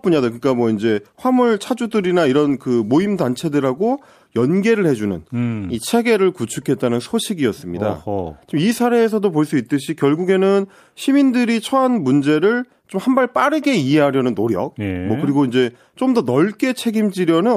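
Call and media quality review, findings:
No audible faults found in this speech recording.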